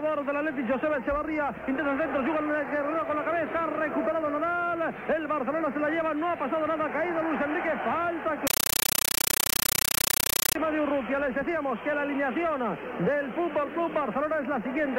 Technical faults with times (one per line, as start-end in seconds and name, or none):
8.47-10.55 compressed stream played as audio